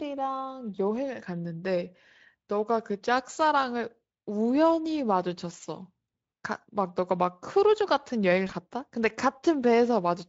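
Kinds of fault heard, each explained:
VoIP packet loss concealed by the speech codec: Twice, near 3.33 s and 8.47 s, the speech briefly smears into a short buzzy tone or coloured noise that fades, consistent with about 20 ms of lost audio each time. The Speex decoder filled each gap by extending its last pitch and filter at falling gain.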